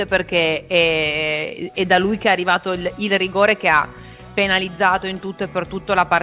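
No faults are audible; the audio carries the narrowband character of a G.711 mu-law call path, with nothing above 4 kHz.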